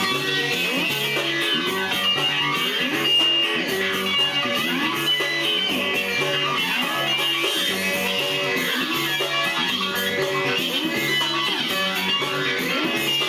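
Wrong sample rate throughout the clip: the audio runs about 1.45 times too fast and sits about 6.45 semitones high, with speed and pitch rising together. This fits material captured at 22 kHz being played back at 32 kHz without any rate conversion.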